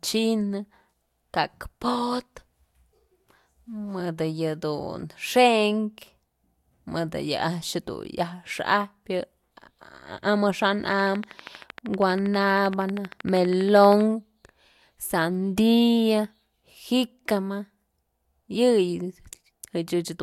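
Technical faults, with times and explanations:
10.92–14.02 s, train of clicks: likely interference or a faulty connection injecting regular pulses, about 12.6 per second, roughly forty similar clicks ticking around 5 dB above the speech.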